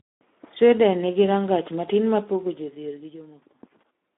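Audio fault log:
Throughout, Speex codec: the speech has the hoarse, grainy texture of a low-rate CELP coder, which fits a setting around 11 kbps, with too few bits to rebuild the excitation. The band sits between 200 Hz and 3.6 kHz with nothing above 3.8 kHz, unlike plain band-limiting, which stays clean.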